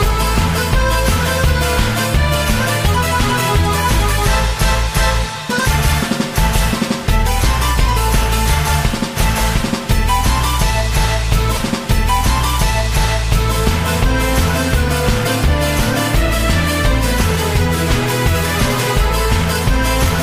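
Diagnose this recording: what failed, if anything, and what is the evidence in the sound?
A stream segment repeated at the playback stage. From 11.56 s to 13.56 s, two seconds of the programme play a second time, with a small blip at 11.56 s where the audio jumps back. The join is abrupt rather than a smooth loop. The player fetched or queued the same segment twice, so it played that block again before continuing, adding 2 s to the running time.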